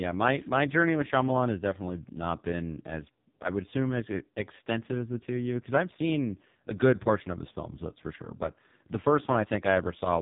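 AMR narrowband mobile codec damage runs through the whole speech clip. The speech is rebuilt from a coarse vocal-tract model driven by sparse pulses, so it sounds heavily buzzy and synthetic. This fits the codec's lowest 4.75 kbps mode, and nothing passes above 3.8 kHz.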